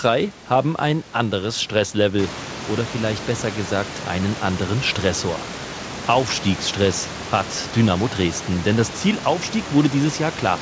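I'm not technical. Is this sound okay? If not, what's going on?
Yes, nothing is wrong with it; the faint background noise that gets clearly louder from about 2 s is just the room the microphone was in.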